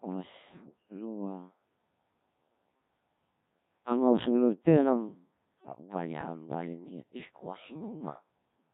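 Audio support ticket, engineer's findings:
Robotic, buzzy speech throughout, waveform detail gone. Codec 2 vocoder: resynthesised from pitch, voicing, energy and spectral envelope only; heavy damage fits a 1.3 kbit/s mode.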